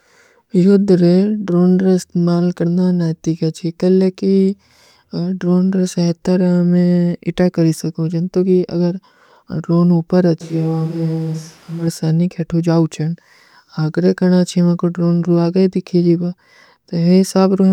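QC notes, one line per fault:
10.41 to 11.87 s, switch to a distant microphone: the speech abruptly turns roomy and hollow, drops about 5 dB, and room noise rises to roughly 30 dB below it, then snaps back. Likely the close mic cut out and a farther one covered the gap.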